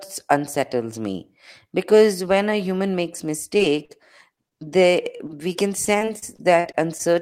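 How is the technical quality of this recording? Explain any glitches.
The recording is degraded by network dropouts in the second half.

Short concealed packet loss: brief smears or wobbles at 3.57, 3.85, 4.35, 4.49 and 4.59 s, where 20 to 40 ms of audio never arrived and the receiver extended the preceding sound to cover each gap.

Repeated packet loss (robotic sound): from 5.17 to 7.01 s the audio turns choppy. Eleven gaps of up to 40 ms, about 13% of that stretch, were each patched by continuing the last sound.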